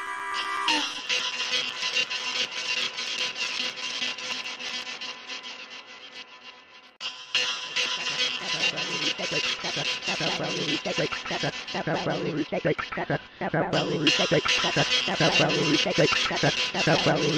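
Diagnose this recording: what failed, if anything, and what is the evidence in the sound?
Periodic USB or driver dropouts at the driver stage: silent gaps of a few milliseconds every 0.125 s from 0.07 to 4.82 s. Their strict regularity, unlike random crackle, points to a blocking task.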